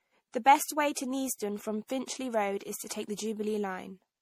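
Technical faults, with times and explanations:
Throughout, generation loss: the speech sounds swirly, hollow and smeared, with blurred attacks and nothing above 17.1 kHz. This is likely repeated MP3 encoding, about five passes consistent with 64 kbit/s, each requantising on a shifted frame grid so noise and spectral gaps accumulate.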